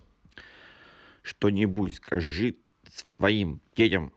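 Repeated stalls (stutter) run from 1.71 to 3.20 s. Packets reached the receiver late, so the jitter buffer emptied eight times and the last sound was stretched to fill 390 ms, the longest hold 140 ms. No speech is lost, but delivery drags and hiccups.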